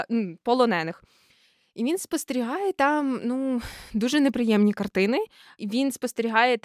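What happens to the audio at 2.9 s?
Nothing goes wrong at 2.9 s; the speech carries on intact through that moment, with no dropout, click or distortion.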